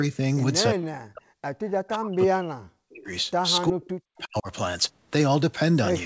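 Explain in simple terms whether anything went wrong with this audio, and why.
The voice drops out sharply from 0.75 to 1.31 s, 1.95 to 3.12 s and 3.7 to 4.49 s. That's likely speech suppressed in double talk, where the echo canceller turns this side's voice down along with the echo while both people talk. There's also likely echo leak at 1.68 to 1.9 s and 4.16 to 4.22 s: a faint copy of the voice coming back about a third of a second late.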